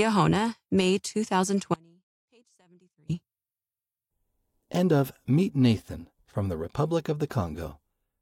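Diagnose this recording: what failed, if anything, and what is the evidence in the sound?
An audio dropout to a faint residue runs from 1.74 to 3.09 s. The speech cuts off abruptly for about 1.35 s, leaving only faint sound roughly 35 dB down. The likely stage is analogue wiring: an intermittent connection broke while the downstream path stayed live.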